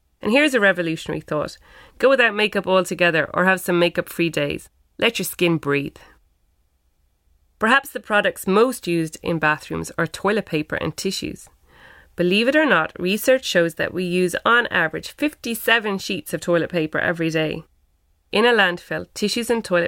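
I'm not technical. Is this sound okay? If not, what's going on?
Yes, this sound is okay, and there's nothing going on with it that needs fixing.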